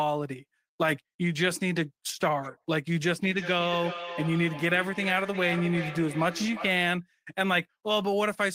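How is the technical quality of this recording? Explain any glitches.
The recording has one clear glitch: a feedback echo between two devices from 3.17 to 6.97 s. Throughout that stretch, each bit of speech returns about four-tenths of a second later, peaking at about 10 dB below the direct speech and sounding thinner and more ringing. A second device in the room is playing back this microphone's own signal, which is picked up again, and neither device's echo canceller removes the other's playback. On a waveform, fainter copies trail each burst at that regular spacing. A spectrogram shows ghosted, narrowed repeats of each syllable at the same interval.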